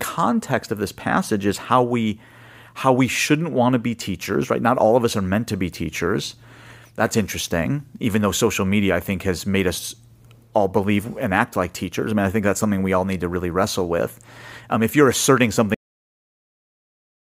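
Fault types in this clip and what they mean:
Cut-off end: the speech just stops dead at about 15.74 s, mid-sound, because the final stretch of audio never got written out. Instead of trailing off naturally, it drops straight into flat digital silence with no decay, and stays silent right through to the end.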